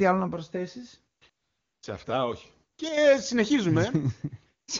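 Right after "άλλο να προσθέσει", you get AMR comfort noise: a brief blip at 1.19 s, then a longer stretch from 1.29 to 1.81 s, plus another short one at 2.73 to 2.77 s. The phone decided nothing was being said, stopped sending speech frames, and the far end filled in a smooth, steady synthetic hiss that pops in and out in place of the real background.

Just after that, from 2.89 to 2.97 s, the sound suddenly sinks by about 6 dB and then comes back. That's the signature of one channel dropping out, likely one side of a stereo feed vanishing before the mono mix, so only the shared content survives at half level.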